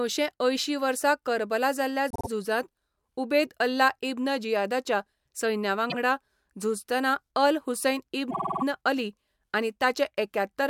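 Repeated frames hit this speech recording three times: a short run of compressed audio, which fits a pair of frames, was delivered again so the decoder replays a 52.2 ms block. After "करबला जाल्ल्या" it loops three extra times (2.10–2.28 s), once more at 5.89–5.95 s, and after "झुजतना अल हुसैन" six extra times (8.30–8.63 s). Each produces a stuttering echo and stretches the audio by up to 313.5 ms.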